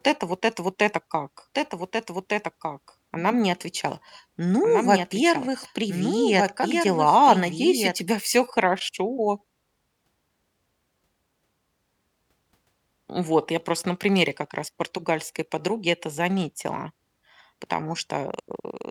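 From 1.55 s, right after "это вот это как", the speech runs over itself: a second copy of the same speech trails about a second and a half behind, roughly 5 dB quieter, dry and full-band, and it cuts in and out abruptly, stopping at 8.0 s just before "всё хорошо". This is a doubled audio track, likely from the signal being captured twice, once through a slower path, so two identical copies are mixed out of step.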